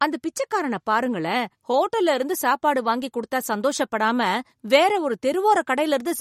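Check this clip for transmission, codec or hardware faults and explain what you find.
One codec fault runs through the whole clip: the speech carries audible MP3 compression damage from start to finish. The top end stops dead at 16.5 kHz. Beneath that, weak frequency lines drop in and out between frames, so sibilants turn watery and swirly and consonant onsets smear. That is likely the encoder running short of bits, which fits a low bitrate around 48 kbps. A simple low-pass filter would dull the treble without this shimmer.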